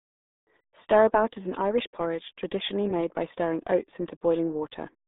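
Throughout, the speech passes through the RealAudio 14.4 codec, at a rate that fits 8 kbit/s. It is confined to 200 Hz to 3.7 kHz and sounds heavily muffled and gargly.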